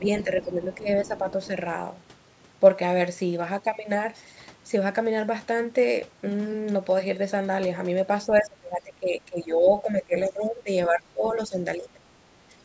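Speech suppressed in double talk appears at 0.0 to 1.49 s, 8.27 to 12.05 s and 12.49 to 12.54 s in this speech recording. The talker's level dips by roughly 10 dB in the first and last stretches and by about 20 dB across much of the long middle one, with the speech thinning and breaking up in pieces. The likely cause is an echo canceller that could not tell the local talker from loudspeaker echo while both sides spoke, so it turned everything down. The other side's voice leaking through is heard at 0.19 to 1.47 s and again briefly at 8.37 to 8.42 s, as a faint second voice roughly 20 dB below the talker. This is likely residual echo from the far end playing on the talker's loudspeaker that the canceller failed to remove from the microphone signal. These leaks overlap the suppression episodes, which is consistent with simultaneous talk confusing the canceller. The call's microphone processing, with its bass roll-off and nothing above 8 kHz, is part of the normal path.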